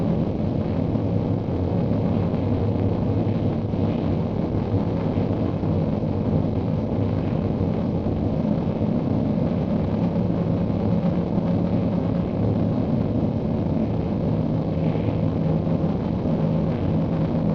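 A recording of everyday sounds with overlap-add ripple from start to end: the level dips and swells by about 11 dB at around 400 Hz, once per frame, so it sounds like a metallic buzz with extra tones around each sound. That fixed, machine-regular rate sets it apart from musical tremolo.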